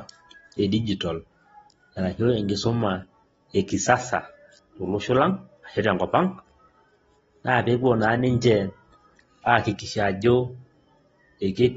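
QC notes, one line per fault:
Throughout, AAC compression. Nothing is heard above 7.6 kHz, so the speech sounds dull and muffled. Codec damage is plainly audible across the clip. The likely cause is AAC-LC at a low rate, which fits about 24 kbps, lowering its cut-off to save bits.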